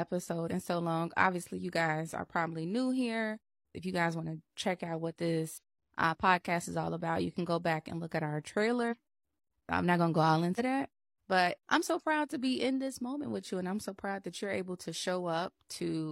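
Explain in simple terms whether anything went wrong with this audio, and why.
Compressed frames skipped at 0.47, 1.54, 5.58, 8.87 and 10.55 seconds: small chunks of the speech, roughly a twentieth to a seventh of a second each, are missing or damaged in the file and get dropped, so the audio jumps ahead.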